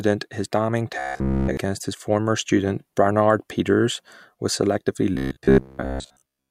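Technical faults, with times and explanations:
0.99–1.57 s and 5.15–6.50 s, robotic sound from repeated short buffers: after "his damning" up to "former student", and again from "was selectively" to the end, the speech turns into a rigid metallic buzz at 66.8 Hz. New audio likely arrived late, so a piece of about 15 ms was replayed in a loop instead. The first span is repeated throughout. In the second span the repeats fill most of it, so some real speech still shows through.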